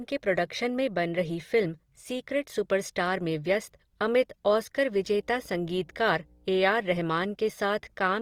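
Throughout the speech the sound is grainy and rough rather than swirly: voiced sounds pick up a noisy, sandpapery texture, yet the spectrum stays full, with content reaching up to about 20.2 kHz and no obvious holes or warbling. That combination points to Opus compression, likely in its CELT music mode at a low rate around 24 kbps. The encoder fills starved bands with folded or noise energy instead of dropping them, so it sounds rough rather than showing MP3-style swirl.

Right after "अमित ऑस्कर", from 4.97 s to 6.47 s, a steady low tone at 60 Hz appears with a few low harmonics, sitting roughly 35 dB below the speech. This is mains hum, power-line energy coupled in through a ground loop or nearby transformer. Its fixed pitch and constant level set it apart from rumble or handling noise, which drift and thump rather than holding one tone. It starts and stops within that 1.5 s span.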